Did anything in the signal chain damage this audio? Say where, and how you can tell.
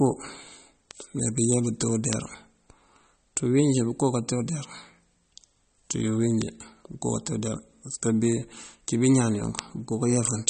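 Yes. Throughout the clip the speech is band-limited, with nothing above 8.4 kHz, and it carries plainly audible codec damage: a watery, swirling texture and chirpy sibilants as weak spectral detail flickers in and out between frames. The most likely cause is MP3 compression at the codec stage, and the damage fits a low bitrate of about 32 kbps. A plain analogue or resampling low-pass would cut the top just as cleanly but would not make the remaining band shimmer.

Five isolated ticks occur at 0.91, 2.13, 6.42, 7.47 and 9.59 s, each a single corrupted sample. These are bit error spikes from storage or a digital link, where one flipped bit makes the sample value jump by a power of two and then return. The result is an instant broadband click that has nothing to do with the speech. Unlike codec artefacts, which spread across frames, or dropouts, which leave gaps, these ticks occupy one sample each and the audio continues around them unchanged.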